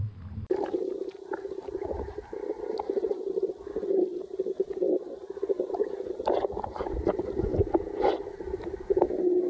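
No technical faults can be heard anywhere in the audio. It has passed through a call path whose wideband codec leaves nothing above 8 kHz, which fits G.722 at 64 kbps.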